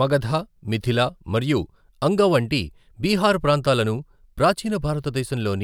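Nothing in this speech recording stands out as a technical fault, so there's nothing to flag here.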